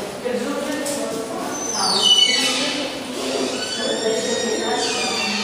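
No technical faults are audible.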